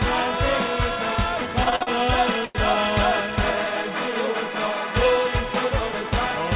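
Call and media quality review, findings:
Repeated stalls (stutter), 1.64–1.89 s: sound drags and catches four times, about 126 ms held in all, longest hold 49 ms, roughly half the span. Jitter buffer repeatedly running dry on late packets; receiver extends the last sound until playout resumes, nothing lost.

Short stall from a late packet, 2.45–2.57 s: one sound held about 96 ms too long, with a slight buzz or dip. Packet arrived roughly 96 ms late; jitter buffer emptied, concealment stretched the last sound, then playback resumed from the same point. Call audio band-limited, nothing above 4 kHz, consistent with a G.711 A-law narrowband path.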